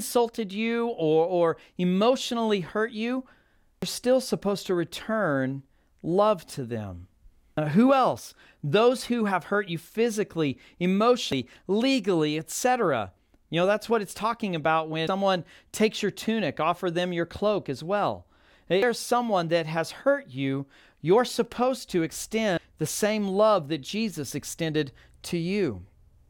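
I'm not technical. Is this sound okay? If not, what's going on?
No. The recording was likely handled in chunks, with a bit dropped at each handover, which is called audio missing between chunks. The speech jumps ahead by roughly a third of a second at 3.82, 7.57 (after "return love to them"), 11.32, 15.07, 18.82 and 22.57 seconds.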